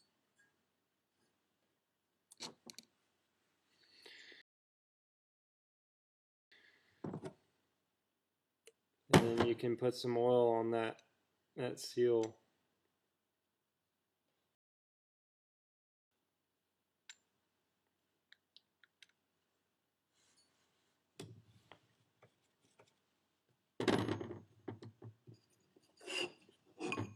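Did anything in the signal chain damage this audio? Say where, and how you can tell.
Yes. There are rebuffering stalls at 4.42–6.52 s and 14.55–16.11 s, at the playback stage. The sound drops to silence for 2.1 s and 1.56 s, then picks up exactly where it stopped. The player's buffer ran dry while waiting for data, so no audio is lost and only time is added.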